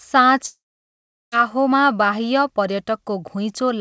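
Speech clip with a long network dropout from about 0.46 s to 1.34 s. Right at 0.46 s the last bit of sound gets stretched into a fading buzz for roughly a tenth of a second, then it's dead silent for about 0.73 s before the audio picks up again, with the missing 0.86 s simply gone. That's most likely packet loss on the call, with the receiver concealing what it could. The G.722 call path shows as nothing above 8 kHz.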